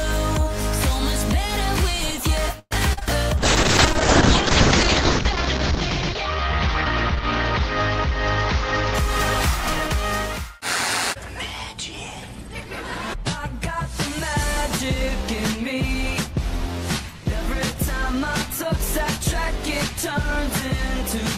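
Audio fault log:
2.59–2.73 s, call audio freeze: about 0.12 s of fading continued sound ending in 30 ms of silence, likely a jitter buffer running dry; the waveform shows a decaying tail then a flat gap.
2.93–3.03 s, short concealed packet loss: 40 ms then 20 ms were missing and filled by extending the preceding sound, leaving a brief smear.
3.39–9.75 s, call bitrate drop: the encoder fell from 64 to 6 kbps, bottoming out for 1.56 s, so the sound turns rough and muffled; the spectrogram's top edge falls from 20 kHz to 8 kHz.
11.15–12.28 s, jitter buffer speed-up: the sound runs 6% fast at unchanged pitch as about 70 ms of pitch periods are cut; the waveform shows slightly compressed timing.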